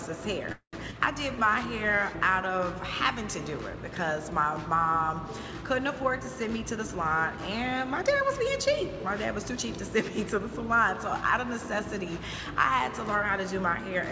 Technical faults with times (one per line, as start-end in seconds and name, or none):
0.52-0.75 call audio freeze
0.91-0.94 skip ahead
1.36-1.97 jitter buffer slow-down
6.48-9.63 jitter buffer speed-up